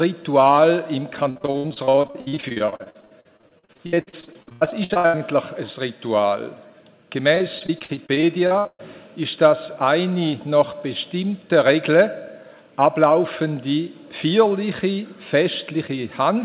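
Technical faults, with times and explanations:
1.3–5.19 s: repeated packet loss (robotic sound). Dozens of short holes recur, the longest 87 ms. Each is patched by extending the last sound, so it turns choppy.
7.35–8.81 s: repeated packet loss (robotic sound). Fewer holes recur here, the longest 122 ms. Continued sound fills them, leaving a brief robotic, broken stretch with pieces missing.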